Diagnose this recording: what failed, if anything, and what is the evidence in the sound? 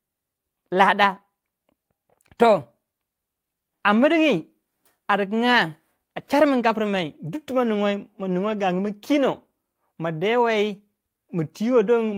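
Network stage: lost packets rebuilt from error correction at 6.95 s and 8.47 to 8.53 s. There are no gaps, just short rough, noisy patches where low-bitrate backup copies filled in.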